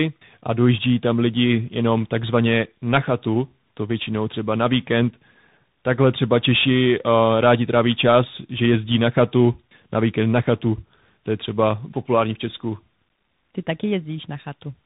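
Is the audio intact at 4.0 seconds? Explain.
No. At 4.0 seconds, as throughout the clip, the speech shows tandem speech coding: it sounds as if it passed through two speech coders in a row, likely an AMR-NB stage followed by a CVSD stage, with a G.711 hop between. Each coder re-encodes the previous one's errors, so the sound is rough, muffled and warbly, with nothing above 3.8 kHz. Plain band-limiting would be muffled but clean, and a single coder would sound less rough.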